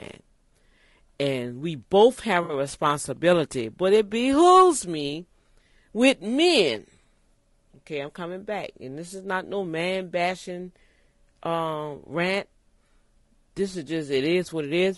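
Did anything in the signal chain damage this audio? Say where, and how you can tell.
Yes, at the codec stage. The speech sounds rough and grainy throughout, with noise filling the gaps between harmonics and a thin, synthetic-sounding top band. That's likely low-delay AAC compression (AAC-ELD-style short frames), starved at something like 32 kbps, so harmonics blur and quantisation noise shows.

Then the network: right after "and we both have", from 2.43 to 2.53 s, there's a smeared, phasey patch, which is AAC frame loss with concealment. About 60 ms went missing, which fits three lost frames, and the decoder patched the gap by rebuilding the last good spectrum.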